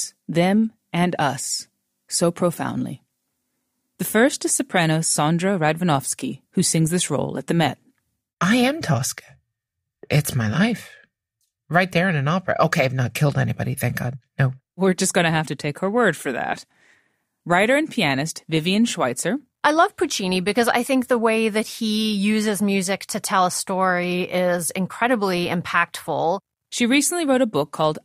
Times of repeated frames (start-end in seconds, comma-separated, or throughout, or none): none